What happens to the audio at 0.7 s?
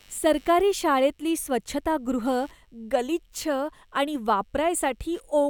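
Computer activity noise is present at 0.7 s and runs through the whole clip: a faint buzzing pulse, around 100 times per second and roughly 40 dB below the speech, as the computer's load changes shift the shared ground of the audio circuit, independent of the speech.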